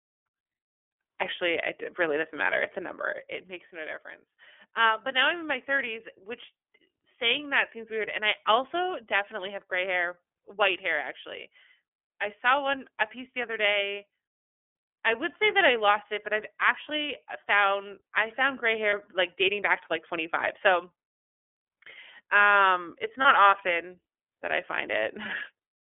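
Throughout, the speech sounds thin, slightly rough and synthetic, confined to roughly 300 Hz to 3.4 kHz. This is plainly audible iLBC codec damage, consistent with its 30 ms frame mode at about 13.3 kbps.

At 18.89 s, between "found i found gray" and "like dating back to", a brief held, buzzy vowel-like smear replaces the speech. At 23.21 s, between "um it's" and "often that i find", the same sound recurs, and again at 25.61 s. These are lost iLBC frames. Each is likely one missing 30 ms packet, which the decoder filled by repeating the last pitch cycle with added noise. Because each iLBC frame is decoded independently, the speech recovers immediately afterward.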